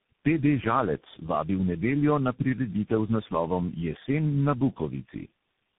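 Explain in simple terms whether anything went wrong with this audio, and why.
Tandem speech coding throughout: the speech went through several phone codecs in turn, each re-squeezing the last one's damage, leaving it rough, warbly and muffled above 3.8 kHz.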